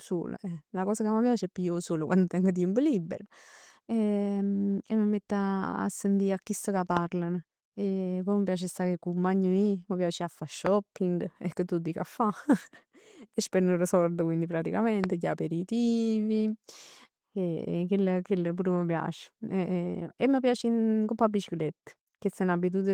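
Speech clip with three single loud pops at 6.97–6.99 s (about 15 dB above the signal), 10.66–10.69 s just after "mi piace 'a fa" (about 20 dB), and 15.04–15.06 s (about 20 dB). Each is a sharp click riding over continuing speech, likely a voltage transient from a switch, connector or static discharge.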